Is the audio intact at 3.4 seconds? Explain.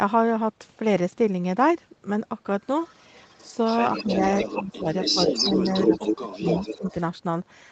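No. From 2.83 to 3.55 s an echo leak is audible: a faint copy of the speech returns 258 ms late. It is likely far-end loudspeaker sound that the echo canceller failed to remove. Unlike reverberation, it is a distinct delayed repeat rather than a smooth decaying tail.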